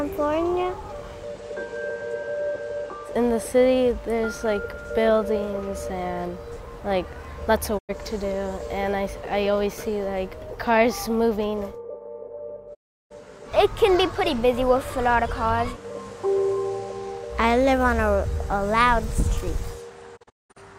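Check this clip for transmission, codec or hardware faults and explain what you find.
Three faults. Digital broadcast dropouts at 7.77 to 7.91 s, 12.73 to 13.12 s, and 20.16 to 20.58 s, where the receiver mutes after losing or rejecting frames. Each fades out over about 20 ms. The last hole is broken into short gaps, the longest about 0.19 s.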